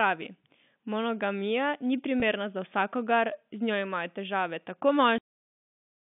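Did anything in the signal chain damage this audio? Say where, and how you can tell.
Yes. At the network stage, a packet loss with pitch repetition hits between 2.20 and 2.22 s. About 20 ms went missing, which fits a single lost packet. The receiver filled it by repeating the last pitch period, so the sound briefly holds with a slight buzz. A spectrogram shows the harmonics running flat for that stretch, and the waveform shows identical cycles copied end to end.

The second fault is a cut-off end at 5.18 s, at the driver or buffer stage during playback. The final buffers were never written out, so the sound stops mid-utterance and drops straight to digital silence with no natural decay. On the waveform this appears as a sheer vertical edge into a flat line, and the spectrogram goes blank from that point to the end.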